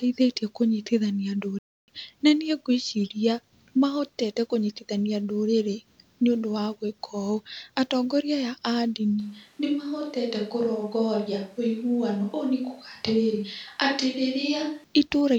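At 1.59 s the speech halts for 0.29 s, then resumes, marking a playback stall rather than a dropout, likely from the player running short of data.

From 9.2 s to 14.84 s a switch to a distant microphone turns the voice abruptly hollow, roomy and thinner, about 5 dB quieter, with room noise roughly 35 dB below it. The sudden change in both directions separates it from gradual reverb, and the likely cause is a lost close-mic signal.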